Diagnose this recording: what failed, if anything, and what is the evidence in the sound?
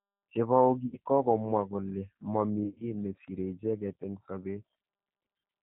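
The speech was carried through a low-rate CELP codec at the codec stage, most consistent with G.729 at 8 kbit/s. The encoder rebuilds each 10 ms frame from a vocal tract filter, a pitch predictor and a few pulses, and nothing above 4 kHz survives. Across the whole clip the speech sounds muffled and band-limited, with a plainly audible rough, synthetic edge where the pulse model only approximates the real waveform.

At the network stage, packets were dropped and the decoder covered the gaps with G.729-style VoIP packet loss concealment. From 0.86 to 0.98 s, about 60 ms of audio was lost. The decoder stretches its last pitch and filter into a fading buzzy tone or coloured noise before "kokomwa kole" resumes. From 2.64 to 2.84 s, losses are scattered over about 160 ms, with the longest gap about 50 ms. Each concealed frame seeds the next, so the sound stays weak and smeared after packets return.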